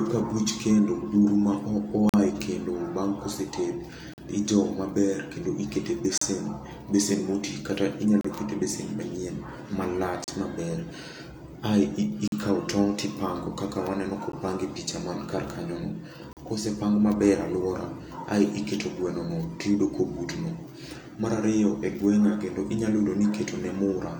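Every two seconds through the first part of the speech, the audio drops out for an instant: 2.09–2.14, 4.14–4.18, 6.18–6.21, 8.21–8.25, 10.24–10.28 (right after "e besen manyien malach"), 12.28–12.32, a very short one at 14.32, and 16.33–16.37. That's a gap between stream segments. The time stamps on the 2 s chunks don't quite line up, so the player fills each hole with 14 to 45 ms of silence. You hear hard-edged blips, but nothing is actually missing.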